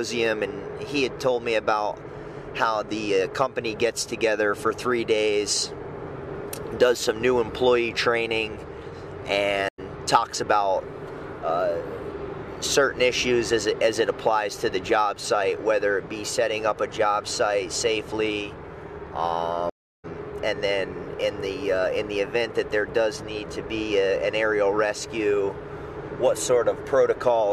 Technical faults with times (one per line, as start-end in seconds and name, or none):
9.68-9.80 stream reconnect
19.70-20.05 stream reconnect